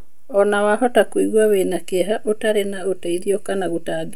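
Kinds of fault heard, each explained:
No technical fault can be heard in this speech recording. Nothing in it calls for a separate line.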